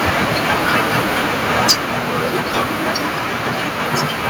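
From 1.6 to 1.73 s the speech turns harsh and crackly, with the loudest part of the syllable sounding flattened and gritty rather than full. This is microphone overload: the peaks reach about 11 dB beyond what the converter can represent, so their tops are sliced off, leaving roughly 7 percent of the samples in that stretch clipped. The cause is likely an input volume set too high for how loudly this passage was spoken.

At 1.71 s, while that distorted peak is still sounding, the whole signal, both speech and background, drops abruptly by about 3 dB and stays quieter. This is the microphone volume stepped down: it is likely that the call software detected the clipping and cut the device's input volume in a single step rather than easing it down, which is why the change is heard as a sudden dip in loudness instead of a smooth fade.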